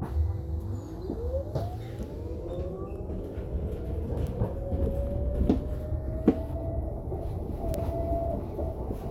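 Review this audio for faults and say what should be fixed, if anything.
Two isolated sharp ticks stand out, one at 4.27 s and a louder one at 7.74 s. Each is a single-sample bit error spike, peaking at about -24 dBFS and about -12 dBFS. A flipped bit in memory or on a digital link jumps one sample by a power of two and snaps back, so the click is broadband and unrelated to the surrounding audio. To prevent it, use error-checked transfer and storage (ECC memory, checksummed links) and repair both samples by interpolation.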